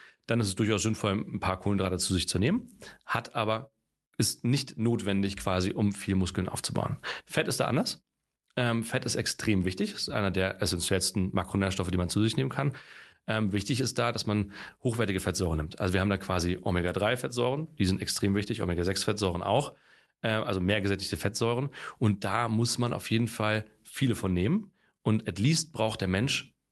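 The sender's audio clock runs about four percent faster than the receiver's, so this speech clip shows clock drift between sender and receiver throughout. Audio arrives slightly quicker than it is played out, and the jitter buffer keeps filling. The surplus has to be thrown away, and the drift itself is not heard as a pitch change but as the steady pressure that forces the corrections described next.

From 0.16 s to 26.69 s the receiver makes repeated timing corrections, cutting out short slices of audio to keep pace with the faster sender. The effective rate is 104 percent. Every edit removes material, but the edits are unevenly spaced. Each one is tiny, and all of it is heard against a call codec's coding noise and top end that stops near 12 kHz.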